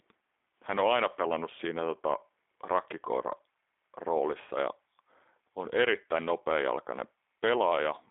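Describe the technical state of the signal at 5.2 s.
At 5.2 s the speech carries G.729 codec damage, present across the whole clip. Each frame is rebuilt from a vocal tract filter, a pitch predictor and a few pulses, consistent with 8 kbit/s coding. It sounds plainly rough and synthetic, band-limited to 300 Hz–3.6 kHz, with nothing above 3.8 kHz.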